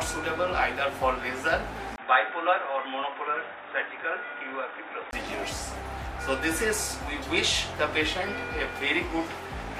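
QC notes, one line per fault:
1.96–5.13 s, input switched to a poorer device: the sound turns dull and boxy, losing everything above 3.8 kHz, drops about 5 dB in level, and carries a fresh background hiss sitting roughly 40 dB under the signal, with a 20 ms gap where the change happens. This is likely the recorder jumping to a narrower-band microphone or headset profile, whose own tone, gain and noise replace the original until the fuller sound returns at 5.13 s.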